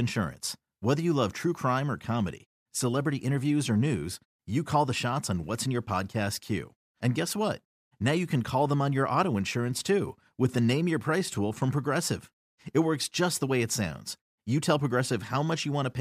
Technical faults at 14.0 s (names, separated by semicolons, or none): none